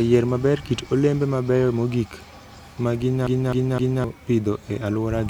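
A speech recording with a CD stuck on one turn: a scratch keeps knocking the laser back one track at the same point of each revolution, so from 3.27 to 4.04 s a slice of about 0.26 s plays three times over, with a brief mute at every jump. The result is a quick, evenly spaced stutter, the familiar sound of a skipping disc, before playback carries on into "pidho e".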